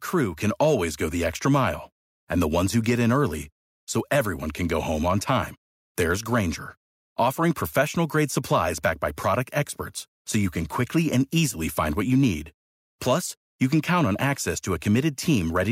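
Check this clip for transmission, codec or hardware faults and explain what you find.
Nothing to flag here; I listened through the speech and didn't pick up any fault at all.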